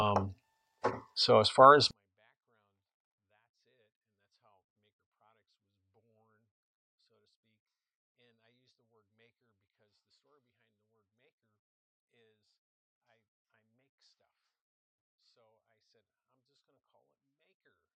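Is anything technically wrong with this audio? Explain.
Yes. From 1.91 s to the end, there is a 24-bit alignment error (too quiet): 24-bit samples sitting in the low bytes of 32-bit words are read as full 32-bit integers. The level falls abruptly by about 48 dB, leaving clean but nearly inaudible sound.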